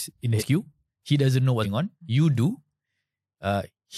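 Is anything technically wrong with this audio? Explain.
Yes. Compressed frames are skipped at 0.38 to 0.42 s and 1.62 to 1.66 s. The speech jumps ahead by roughly 100 ms and 150 ms, fitting whole frames of about 43 ms. Each join is heard as an abrupt jump forward in the speech.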